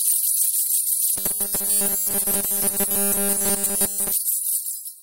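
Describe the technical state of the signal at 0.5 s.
The signal at 0.5 s is intact, with no dropout, distortion or other fault to be heard at that point.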